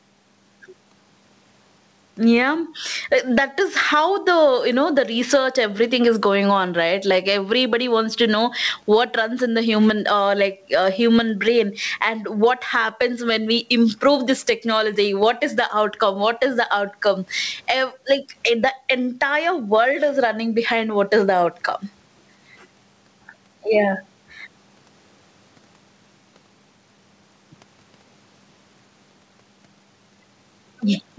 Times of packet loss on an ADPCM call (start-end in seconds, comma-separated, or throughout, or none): none